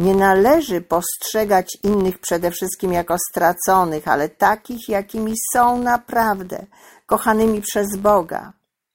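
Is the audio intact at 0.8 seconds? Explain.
No. A filter restarted on every block affects the whole clip, including 0.8 s: its state resets at each block boundary, so every block starts with a small transient, heard as an 86.1 Hz buzz that tracks the speech level, consistent with a 512-sample buffer.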